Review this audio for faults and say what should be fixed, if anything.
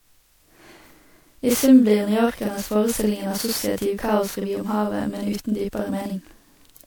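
A channel delay (doubling) runs throughout: one channel arrives about 42.7 ms late, which fits a 2048-sample buffer, and the two channels are summed to mono. The late copy sits at equal level, so the speech sounds doubled, like a tight slap echo. Keep both channels on the same buffer path and check their alignment before the mono fold-down.

Generation loss is present for the whole clip, likely from repeated MP3 encoding at 128 kbit/s, around ten passes. Each pass re-quantises on a shifted frame grid, so the speech sounds swirly, smeared and hollow, with blurred attacks and nothing above 20.8 kHz. Keep a lossless master, and encode to MP3 only once, at the final step.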